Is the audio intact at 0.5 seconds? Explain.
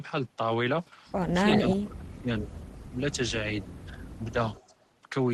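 Yes, the speech at 0.5 seconds is intact, carried through the WebRTC call path with no fault at that moment.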